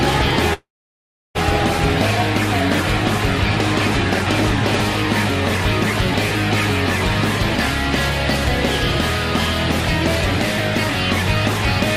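From 0.53 s to 1.39 s the sound gives way to a buzzy continuation of its last moment that fades out, leaving about 0.7 s of near-silence before it resumes. This is likely a long network dropout. The receiver filled the gap while waiting, roughly 600 ms of audio was lost, and playback came back about a fifth of a second later than before. Unlike a brief packet-loss glitch, the concealment dies away into silence and the lost stretch never returns.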